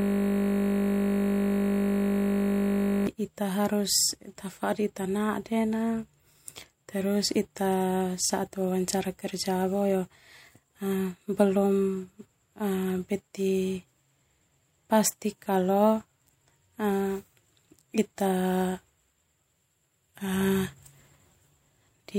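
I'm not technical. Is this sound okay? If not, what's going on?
No. A system hang loop runs from the very start to 3.07 s: the computer froze and a 20 ms scrap of sound repeated, making a steady 50 Hz buzz.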